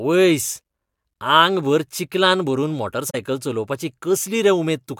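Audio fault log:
3.10–3.15 s, AAC frame loss with muting: the speech fades into a short silent gap of about 43 ms, consistent with two lost frames whose spectrum the decoder set to zero. The overlapping transform windows taper the sound out and back in, so the hole has soft edges. A hard sample-level dropout cuts off abruptly instead, and concealment would fill the gap with repeated or smeared sound rather than leave it empty.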